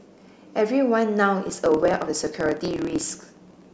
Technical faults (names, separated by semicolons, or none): block size mismatch (truncated)